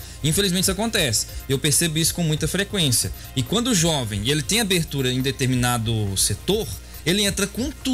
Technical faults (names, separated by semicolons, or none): none